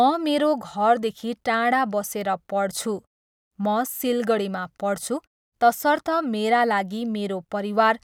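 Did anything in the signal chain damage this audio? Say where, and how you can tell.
No, the chain did no damage.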